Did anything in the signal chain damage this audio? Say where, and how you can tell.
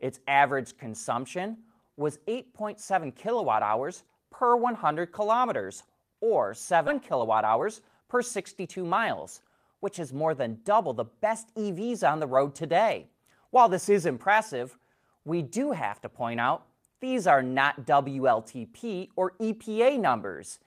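Yes. In the network or at the jitter buffer, a stretch of queued speech was discarded in a skip ahead at 6.87 to 6.89 s, just after "kilometers or". Roughly 0.7 s of speech is missing, and the two sides butt together with no fill, so the phrase lurches forward abruptly.

The jitter buffer then shed its excess backlog with a jitter buffer speed-up, cutting short pitch-period slices repeatedly at 7.15 to 7.60 s and again at 8.60 to 11.33 s. Speech runs at 108% speed with unchanged pitch, sounding hurried across those spans.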